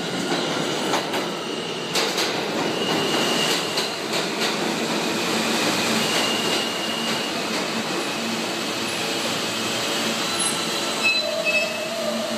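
A nearby DECT cordless phone's radio bursts, every 10 ms, are rectified by the audio circuit, leaving a thin, steady 100 Hz buzz throughout, roughly 30 dB under the sound.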